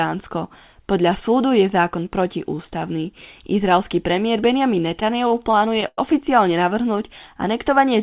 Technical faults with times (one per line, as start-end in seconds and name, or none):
5.00-5.99 repeated stalls (stutter)